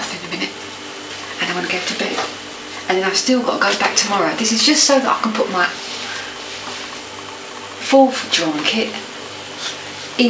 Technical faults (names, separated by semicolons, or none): none